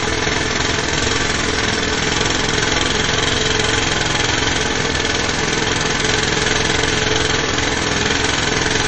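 These sounds are dull throughout, with nothing above 8.3 kHz and layered artefacts from more than one codec, likely from transcoding between lossy codecs, consistent with low-bitrate MP3 re-encoded as AAC.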